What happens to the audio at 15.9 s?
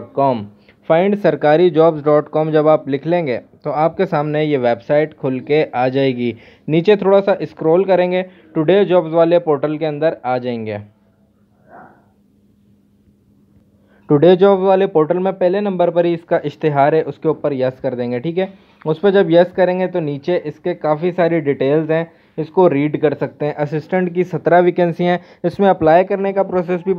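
Nothing goes wrong at 15.9 s; the audio plays through that moment intact, with no dropout, click or other fault.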